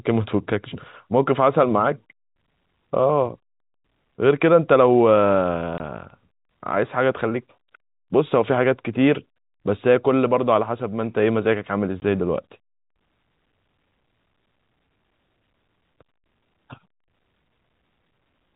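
At 5.78 to 5.80 s and again at 12.00 to 12.02 s, packet loss filled with silence drops a 20 ms stretch from the speech, which fits a single lost packet each time. Both holes start and end abruptly. The telephone-band G.711 coding behind them sounds normal.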